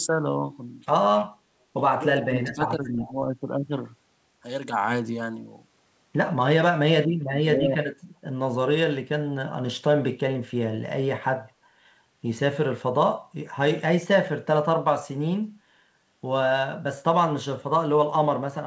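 From 2.28 to 2.6 s the speech dips by about 15 dB and gets patchy. That's speech suppressed in double talk, and the likely cause is an echo canceller that couldn't tell the near talker from loudspeaker echo while both sides spoke, so it turned everything down. Overlapping that, at 2.52 to 2.68 s and again at 2.85 to 3.12 s, a faint echo leak comes through, a copy of the voice trailing by 365 ms at roughly 25 dB under the speech. That's likely a speakerphone whose canceller let some pickup slip back. The suppression returns at 7.05 to 7.46 s, pulling the voice down by about 20 dB, with a lighter, quick dip of around 5 dB at 7.63 to 7.69 s.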